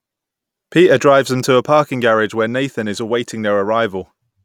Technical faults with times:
none

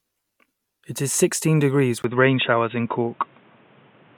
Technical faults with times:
2.02-4.17 input switched to a poorer device

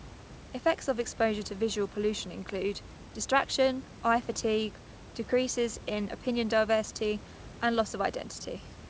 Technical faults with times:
none

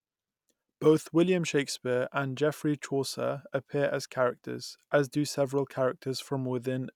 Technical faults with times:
none

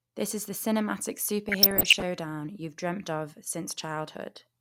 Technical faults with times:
1.49-2.02 DAB burbling

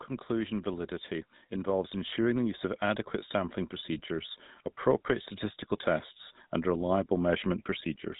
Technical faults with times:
0.00-8.19 GSM full-rate codec
0.27-4.41 automatic gain rising

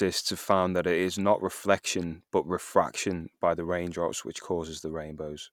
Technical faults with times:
none

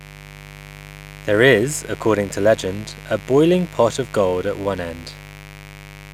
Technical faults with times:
0.00-6.14 mains buzz

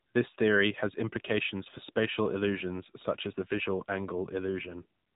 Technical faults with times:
0.00-5.15 AMR narrowband mobile codec

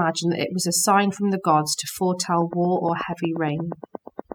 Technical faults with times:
0.00-4.35 overdone noise removal

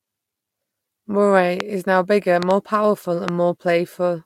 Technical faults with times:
1.60-1.62 loud pop
2.43-2.53 loud pop
3.28-3.30 loud pop

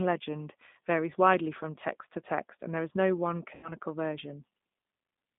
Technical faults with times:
0.00-5.38 G.729 codec
3.55-3.73 VoIP packet loss concealed by the speech codec

